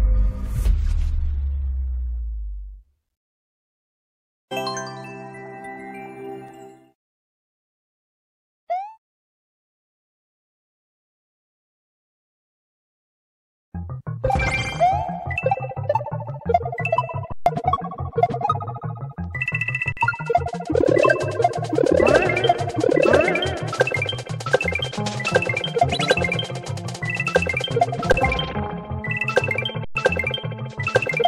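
Underruns with held sample at 17.32–17.46 s, 19.92–19.97 s, 28.12–28.14 s and 29.85–29.95 s, lasting 139, 46, 20 and 109 ms. The output buffer ran empty, and the 46 ms gap fits a 2048-sample buffer. Each time the waveform freezes flat, so the sound stops with little or no click. Live audio was lost during each gap.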